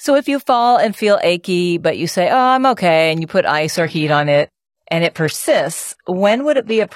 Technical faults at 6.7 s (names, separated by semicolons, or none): adaptive stream at a lower bitrate